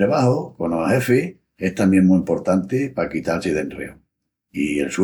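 Nothing technical stands out in this short speech recording; there's no fault to flag anywhere in it.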